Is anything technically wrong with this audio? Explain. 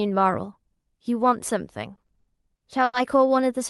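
Yes, there's a stutter problem in the speech, which reaches you through a call codec whose top end stops around 12 kHz, consistent with Opus at about 40 kbps. From 1.95 to 2.95 s you get repeated stalls (stutter). Packets turned up late, the jitter buffer kept running dry, and the receiver stretched the last sound across six gaps, the longest 90 ms, about 240 ms in all. Nothing's actually lost, but it drags and hiccups.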